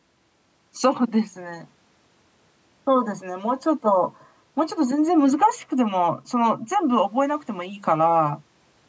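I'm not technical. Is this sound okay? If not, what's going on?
Yes, it's fine: this is speech that went through a call's microphone processing, which trims the deepest bass and leaves nothing above 8 kHz, and that's just how calls normally sound.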